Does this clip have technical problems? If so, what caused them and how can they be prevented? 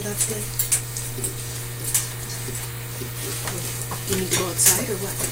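Yes. From 4.13 s to 4.76 s the audio shows hard clipping: the signal drives about 9 dB past what the converter or processing stage can represent, so every peak in that stretch is sliced flat at the ceiling. Those squared-off tops generate strong high-order harmonics, heard as a harsh, buzzy fuzz over the loud material for roughly 0.63 s. Prevention: set input gain so peaks leave headroom below full scale, or place a limiter before the overloading stage.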